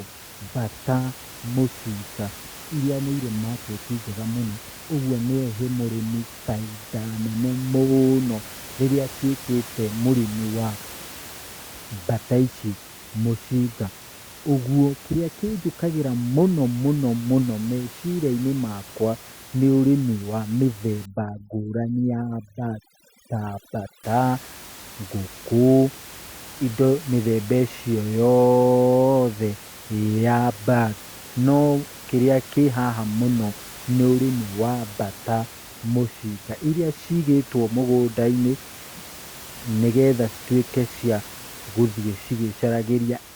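Speech recording, with room noise sitting about 19 dB under the voice. From 21.06 to 24.04 s, overdone noise removal kicks in hard: bands near the noise floor get pulled down, leaving twinkly near-silence.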